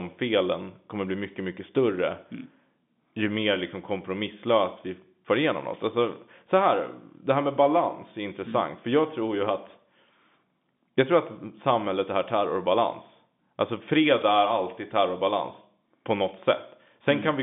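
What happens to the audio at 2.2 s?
Nothing goes wrong at 2.2 s; the speech carries on intact through that moment, heard through the narrow band of G.711 telephone coding, with nothing above about 3.8 kHz.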